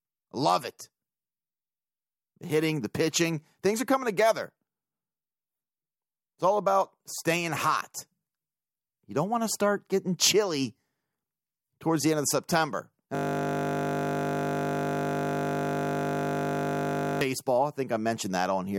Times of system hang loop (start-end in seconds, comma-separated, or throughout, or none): 13.15-17.21